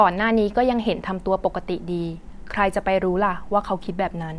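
No technical faults can be heard anywhere in the speech.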